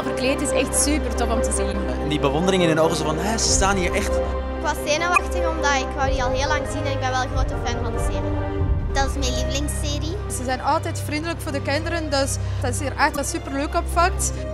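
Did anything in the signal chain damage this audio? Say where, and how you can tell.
Yes, there is damaged data in a compressed stream, at the codec or storage stage: three brief disruptions of about 56 ms each, at 1.69 to 1.74 s, 5.14 to 5.19 s and 13.13 to 13.18 s. Corrupted bytes make the decoder misread frames and resynchronise at the next header. The frame-length span sets this apart from a single-sample click caused by wiring or a converter.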